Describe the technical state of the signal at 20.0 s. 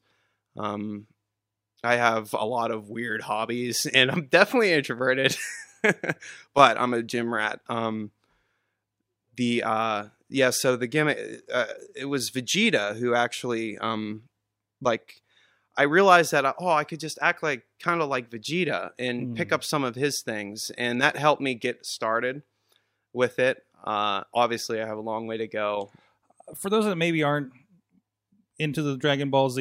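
At 20.0 s the speech signal is intact, with no audible fault at that moment.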